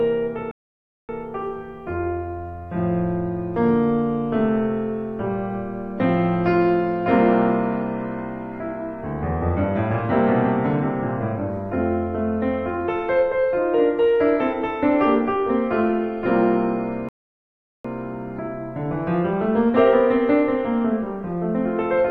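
The music drops to silence from 0.51 to 1.09 s and again from 17.09 to 17.85 s, then picks up exactly where it stopped. These are rebuffering stalls: playback ran out of downloaded audio and waited for more.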